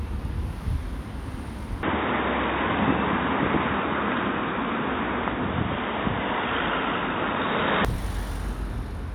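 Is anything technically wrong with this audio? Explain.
Yes. From 1.83 to 7.85 s the recording likely switched its input to a poorer device, a lower-grade capture path. Nothing passes above 3.8 kHz, so the sound turns dull and boxy, shifts in level by roughly 5 dB, and gains a faint new noise floor, clearing again at 7.85 s.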